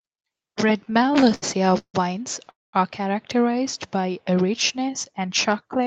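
Repeated stalls (stutter) run from 0.85 to 1.96 s: sixteen brief hold-ups, the longest 157 ms, stretch the sound by about 366 ms, dragging and stuttering it as the jitter buffer repeatedly empties.

A call audio freeze at 2.50 to 2.75 s adds 231 ms. The last sound is held, then fades to 200 ms of silence, likely because delayed packets emptied the buffer.

A jitter buffer slow-down from 3.52 to 5.52 s repeats pitch periods to rebuild its reserve, adding 140 ms. Playback runs at 93% speed with unchanged pitch and drawn-out sounds.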